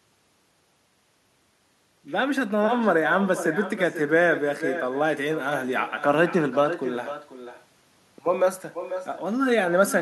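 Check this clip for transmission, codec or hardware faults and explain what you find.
There is one fault, and it runs through the whole clip: echo with no canceller. On the far end, the call is played out of a loudspeaker, and the microphone there picks it up again. No echo canceller removes it, so it travels back across the network. The result is that every phrase of speech is followed, about half a second later, by a second copy about 11 dB quieter and thinner.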